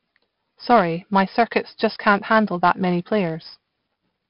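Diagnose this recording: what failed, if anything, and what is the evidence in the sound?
Codec stage: 4-bit ADPCM compression, heavy, for the whole clip. The speech carries gritty hiss rising with each loud syllable and smeared consonant attacks. A spectrogram shows noise tracking the speech envelope and nothing above 5.3 kHz, consistent with about 44 kbps.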